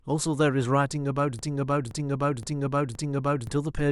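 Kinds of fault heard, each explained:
Broken-record loop: from 1.39 to 3.47 s one 0.52 s fragment of speech plays four times back to back, likely a stalled player or stream resending its last buffer. A spectrogram shows identical blocks repeating edge to edge, and the intended speech is lost.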